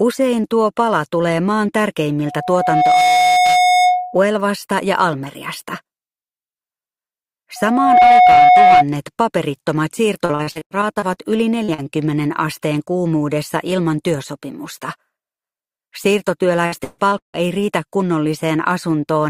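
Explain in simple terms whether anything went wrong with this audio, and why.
Two things went wrong: loudspeaker feedback squeal and lost pieces of the connection.

At 2.26 to 4.22 s, and again at 7.56 to 8.84 s, there is loudspeaker feedback squeal. A microphone picked up its own loudspeaker. One tone, near 728 Hz, fed on itself and swelled into a squeal. The first took most of a second to build. The second rose faster and louder.

From 10.25 to 11.18 s there is repeated packet loss, which gives a robotic sound. Bits of audio kept arriving too late. The receiver patched each hole by stretching the last sound. About a third of that stretch is patched, so it turns choppy.

The same fault returns at 16.66 to 17.36 s, and it is worse there. Over half of this stretch is filled in. One gap lasts about 0.16 s, so the sound turns even more robotic and broken.

At 11.64 s and 11.74 s there are two cases of short concealed packet loss. 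Each is about 40 ms of missing audio. The receiver covered each gap by continuing the sound just before it. These are heard as quick smears or wobbles.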